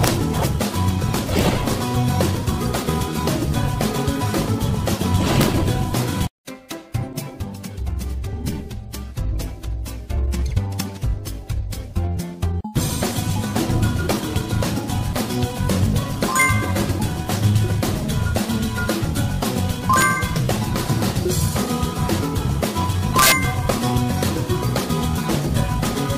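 Integer overflow at 0.04 to 0.08, 1.39, 5.41, 16.42, 19.94 to 20.02 and 23.19 to 23.32 s: peaks at or up to about 3 dB over full scale wrap to the opposite sign, giving violent cracks.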